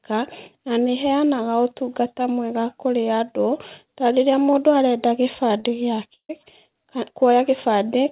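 At 5.6 s there's a short concealed packet loss: about 40 ms never arrived, and the decoder papered over it by stretching the previous sound, so you get a quick smear. Then from 6.14 to 6.31 s the sound turns into a fading buzz before briefly going silent and resuming further on; that's likely a long network dropout. About 160 ms went missing, and the sound throughout is band-limited, with nothing above 4 kHz.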